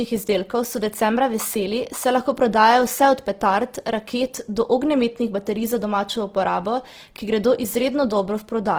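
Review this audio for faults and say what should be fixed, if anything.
Opus compression runs throughout the speech. It is likely a CELT-mode encode around 16 kbps, with noise-filled bands making tones grainy and rough. A spectrogram shows speckled, blurred harmonics, with full bandwidth up to about 20.2 kHz. To prevent this, encode from the original source at a much higher Opus bitrate.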